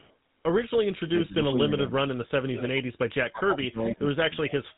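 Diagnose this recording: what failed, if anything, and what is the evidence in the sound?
At the codec stage, GSM full-rate coding runs throughout: nothing above 3.8 kHz, plus a buzzy, gravelly roughness from pulse-driven excitation that plain band-limiting would not produce.

In call processing, echo leak appears at 0–0.14 s, 2.54–2.81 s and 4.48–4.53 s. A copy arrives a fixed 433 ms late, about 35, 10 and 20 dB down, likely from a far-end echo canceller. The fixed delay separates it from reverb.

Speech suppressed in double talk spans 3.19–4.31 s, with roughly a second of dips reaching about 30 dB. These are likely gain cuts while both sides talk, not network gaps.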